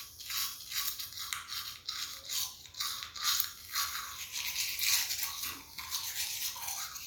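No technical faults can be heard at any point in this audio.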